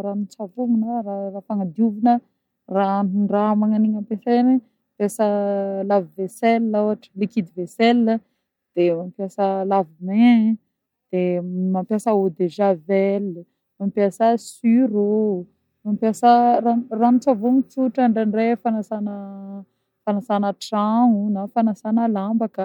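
No technical faults can be heard anywhere in this speech recording.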